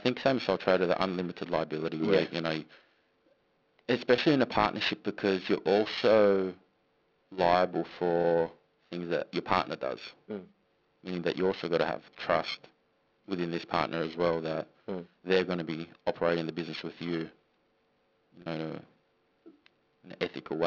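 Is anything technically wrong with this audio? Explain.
Yes. Throughout the speech, a rough, metallic edge clings to the sound and drops away in pauses. This is periodic clock jitter: the converter clock wobbles at around 1 kHz, adding sidebands at that spacing.

At 4.16 to 4.18 s, before "in a partnership because", and at 8.22 to 8.24 s, before "things that your partner", there is a brief held, buzzy moment, with a slightly longer one at 18.42 to 18.46 s. This is packet loss with pitch repetition: 20 ms, 20 ms and 40 ms of audio went missing, and each gap was filled by repeating the last pitch period.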